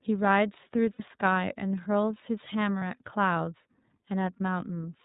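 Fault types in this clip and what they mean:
iLBC codec, throughout: nothing above 4 kHz survives, and each independently coded frame, consistent with 30 ms frames at 13.33 kbps, leaves the speech plainly rough and synthetic.
Lost iLBC frames, at 0.93 s for 60 ms and 2.79 s for 30 ms: the decoder repeats the last pitch cycle with noise, giving a brief buzzy held vowel before recovering almost immediately.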